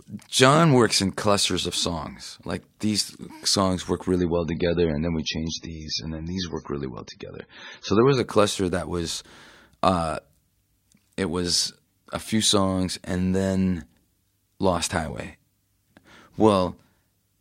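Adaptive stream at a lower bitrate, from 4.17 to 8.17 s: the speech abruptly loses its top end, with nothing above 6.6 kHz, and takes on a thin, swirly, slightly metallic quality as compression artefacts thicken. There is no gap at either boundary; quality simply steps down and then back up. This points to the player switching to a much leaner encoding while the connection slowed, which fits a fall from roughly 128 kbit/s MP3 to 16 kbit/s.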